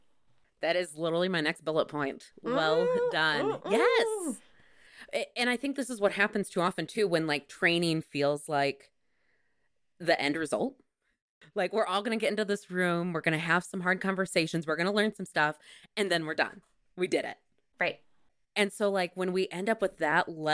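No technical faults are audible anywhere in this speech recording.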